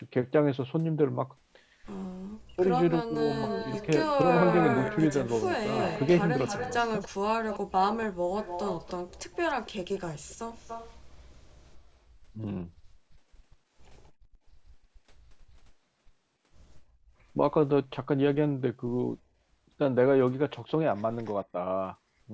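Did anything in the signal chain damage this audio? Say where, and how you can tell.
Yes. The speech twice sinks almost to silence, at 2.33 to 2.66 s and again at 3.03 to 3.25 s, with a drop of around 40 dB before it recovers. This is speech suppressed in double talk, likely at the call-processing stage. The echo canceller could not tell the local talker apart from loudspeaker echo while both sides were active, so it attenuated everything.

A second, delayed copy of the speech trails the original by about 286 ms, sitting about 10 dB below it from 3.34 to 7.08 s and from 8.39 to 11.21 s. It appears again briefly at 7.5 s, about 15 dB down. The fixed delay identifies it as an echo leak, again call processing. The far end's canceller on a loudspeaker device likely failed to remove all of the microphone pickup and returned the residue, which is band-limited with the rest of the call at 8 kHz.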